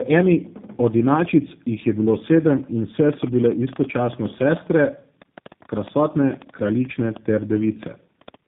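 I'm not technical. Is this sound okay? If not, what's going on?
No. Throughout, this speech has tandem speech coding: it was squeezed by two phone-network speech codecs in a row, so it sounds rougher and more warbly than one would make it, and dull above 3.7 kHz.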